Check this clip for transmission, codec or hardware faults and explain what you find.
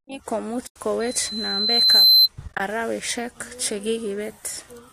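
Two kinds of fault are present in this speech clip: AAC frame loss with muting, occurring twice, and a loudspeaker feedback squeal between them.

AAC frame loss with muting hits from 0.67 to 0.76 s and again from 2.48 to 2.60 s. The decoder received no data for those frames and zeroed their spectrum. The overlapping windows then fade the sound out and back in, so each gap is a soft-edged dip. The first gap is a single hole of about 90 ms, which fits roughly nine 10 ms frames. The second is about 70 ms of loss scattered over 120 ms, with no run much longer than 20 ms, so it sounds like a series of brief dips. On a spectrogram these appear as full-height blank columns. In the waveform the envelope tapers smoothly down to silence.

The loudspeaker feedback squeal runs from 1.00 to 2.28 s. A microphone is picking up the loudspeaker it drives, and at 4.1 kHz the loop gain exceeds one. That tone feeds on itself, rising over about a second until it sits roughly 15 dB above the speech, and it ends at 2.28 s. 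It is heard as a piercing whistle that swells and then dominates. A spectrogram shows a single bright horizontal line at 4.1 kHz that grows steadily. The waveform amplitude swells across the same span.

Beneath all of this the speech has a light roughness, likely from low-delay AAC-ELD coding, at a rate that points to about 64 kbps.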